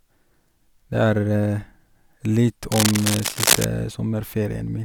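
From 2.71 to 3.65 s, a burst of cable scratch noise runs over the speech. It sounds like dense, ragged scratching and rustling, roughly as loud as the speech itself. The bursts are uneven and crowd together for just under a second, then stop. The likely cause is a worn cable or connector being moved. Its contact resistance would then jump about rapidly, and each jump lets a spurt of crackle into the signal.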